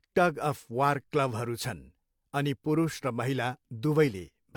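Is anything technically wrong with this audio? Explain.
No, nothing technically wrong can be heard in this speech clip. Nothing in it points to a problem in how the audio was captured, processed or delivered.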